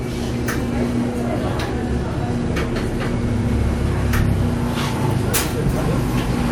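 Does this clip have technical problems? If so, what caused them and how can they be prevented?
No, there are no technical problems to hear.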